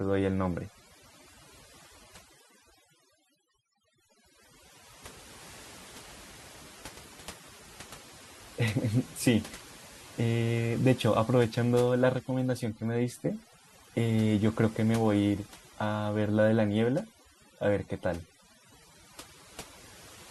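A speech recording with overdone noise removal the whole way through: the denoiser's gating bands hard, so pauses go near-silent with twinkly specks.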